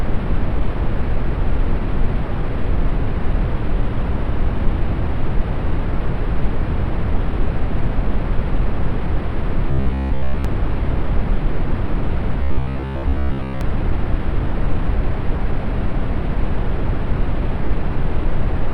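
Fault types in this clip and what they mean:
Robotic sound from repeated short buffers: From 9.71 to 10.45 s and again from 12.43 to 13.61 s the sound turns into a rigid, metallic buzz fixed at 66.8 Hz while still loosely tracing the original contour. That pitch corresponds to a segment of about 15 ms being replayed over and over, most likely because fresh audio arrived too slowly and the gaps were filled by looping the last short stretch, with most of the real material skipped.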